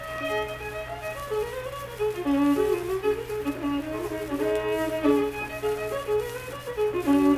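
Nothing in the recording stood out as a technical problem on listening.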